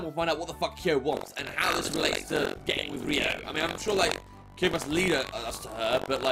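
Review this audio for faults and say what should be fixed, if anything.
Buffer tearing runs from 1.11 s to the end. A rough, robotic buzz sits at 46.9 Hz, which fits a 1024-sample buffer. In each period, a small slice of about a sixth repeats sound roughly a tenth of a second old. Hard joins bracket it. Keep the writer ahead of the hardware read pointer, with enough buffering margin to absorb scheduling delays.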